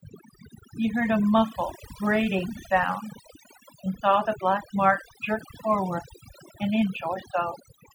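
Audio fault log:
Throughout: overdone noise removal. A noise reduction stage was pushed too hard on a noisy speech recording. It cuts individual frequency bands deeply whenever they sit close to its noise estimate. Quiet parts of the voice fall into that range and are removed along with the noise. The background drops, flecked with small twinkling artefacts.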